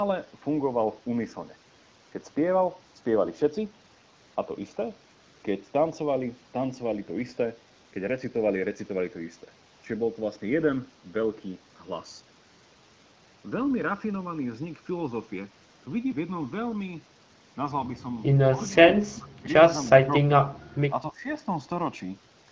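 From the start of this speech clip to its end, the two channels drift apart. Each channel was clocked by a separate device, with the clocks differing by around 50 parts per million, so the gap between them grows steadily to about a millisecond by the end. Summed to mono, that sliding delay produces comb-filter notches that creep slowly across the spectrum, heard as a slow, continuous flanging. A spectrogram shows dark bands gradually shifting position over the clip.

Three short dips follow, from 18.52 to 18.77 s, from 19.04 to 19.46 s, and from 21.11 to 21.25 s. The likely cause is speech suppressed in double talk: with both sides talking at once, the echo canceller mistook the talker for loudspeaker echo and turned the signal down. The first and last dips are about 10 dB deep, the middle one about 20 dB. The waveform shows pinched, low-amplitude stretches, and a spectrogram shows the energy fading in those spans.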